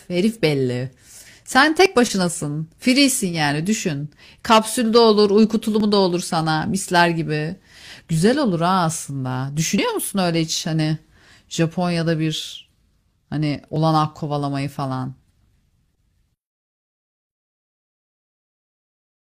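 The first hit comes at 1.86 to 1.88 s, then again at 5.80, 9.78 and 13.76 s, all signs of overlap between stream segments. Each time two roughly 4-second segments claim the same few milliseconds, the player trims that stretch even though it wasn't actually duplicated. A sliver of the speech goes missing and the waveform jumps, so you get a small click or hiccup. They land almost like clockwork, just under 4 s apart.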